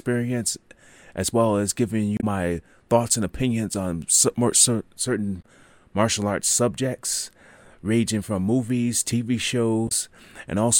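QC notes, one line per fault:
2.16–2.24 s (after "as well as giving"), 5.38–5.45 s (before "martial arts subjects ranging") and 9.85–9.91 s: damaged data in a compressed stream. Corrupt frames make the decoder misread data and lose sync, producing brief glitches. On the spectrogram, each shows as a short broadband smear; on the waveform, as an abrupt discontinuity.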